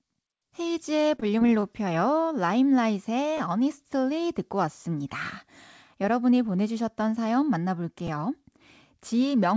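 From 1.16 to 1.64 s, repeated packet loss leaves five short holes, the longest 21 ms, each patched by extending the previous sound, so the speech turns choppy and robotic. At 3.38 to 3.40 s, a repeated buffer occurs: fresh audio arrives late and the last 10 ms block plays twice more, giving a brief buzzy stutter and dropping about 20 ms. At 8.07 s, the same fault repeats a single extra time, a quick click. Throughout, the call path's codec leaves nothing above 8 kHz.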